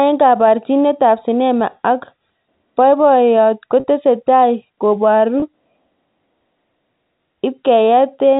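Packet loss with pitch repetition at 3.80–3.84 s and 5.40–5.42 s: the last pitch period is repeated across each gap, leaving a brief, buzzy held tone.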